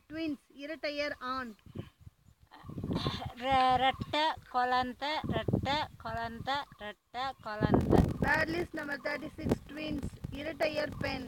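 From 7.79 s to the end, a 46.9 Hz buzz appears and the sound slows to 0.861 times speed at normal pitch: a padded block size mismatch, with zero-filled gaps in each block, fitting 1024-sample reads.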